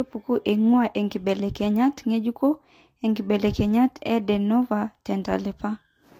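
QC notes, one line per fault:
Throughout: transcoding between lossy codecs. Speech with nothing above 16.6 kHz and layered artefacts from more than one codec heard together, likely from HE-AAC at 48 kbit/s re-encoded as Vorbis at 49 kbit/s.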